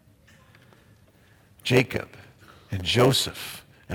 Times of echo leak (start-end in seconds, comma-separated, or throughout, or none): none